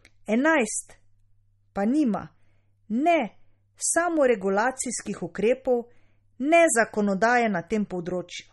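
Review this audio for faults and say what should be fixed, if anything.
Throughout, the speech sounds watery and swirly, with nothing above 11.7 kHz. The likely cause is MP3 compression at a starved bitrate around 32 kbps, which zeroes weak frequency lines. To prevent it, keep a lossless master, or encode at a much higher bitrate.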